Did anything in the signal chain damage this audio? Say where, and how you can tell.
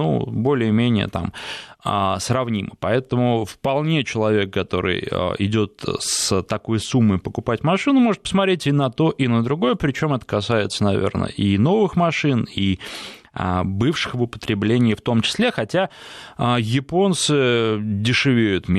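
No, nothing in the signal chain damaged this recording.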